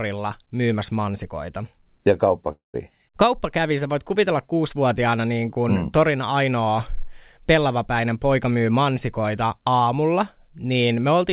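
At 2.52 s the speech cuts out until 2.76 s, most likely a long network dropout. About 0.22 s of audio never arrived, so the receiver stretched the last sound into a fading buzz before settling into a short silence. On a spectrogram, a smeared, decaying band gives way to a near-empty gap, all below 4 kHz as the narrowband call codec allows. In the waveform, the envelope shrinks to a flat line before the speech resumes.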